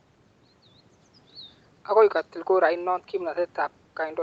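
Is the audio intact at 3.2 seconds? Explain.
Yes, the speech at 3.2 s is intact, with no dropout, glitch or other fault at that moment.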